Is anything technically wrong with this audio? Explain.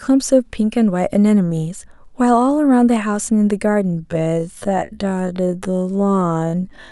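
Yes. From 3.89 s to the end at 6.92 s, the speech is a time-stretched section. The likely cause is software lengthening that stretch to fill a longer slot while holding the pitch fixed, repeating short slices of the audio to run it at 0.5 times its original pace. The result is an abrupt drop to half speed with no pitch change, and the speech drags.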